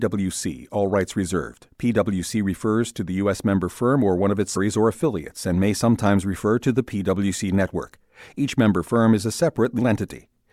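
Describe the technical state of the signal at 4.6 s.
Damaged data in the compressed stream at 4.55 s knocks the decoder out of frame sync, leaving a brief glitch such as a chirp, squawk, click or short hole between "or one of its" and "or affiliates and may".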